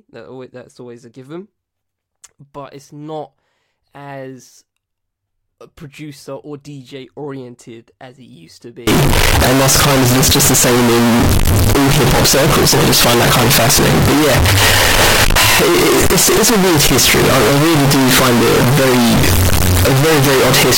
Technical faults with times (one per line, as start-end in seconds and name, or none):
8.87-20.77 float read as integer